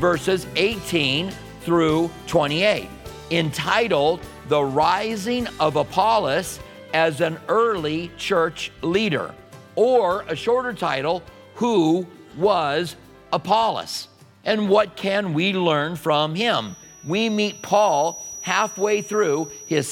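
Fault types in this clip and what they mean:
feedback whistle: from 16.57 s to the end, a thin 5.8 kHz tone rides roughly 20 dB below the sound, likely from a speaker-microphone loop balanced at feedback.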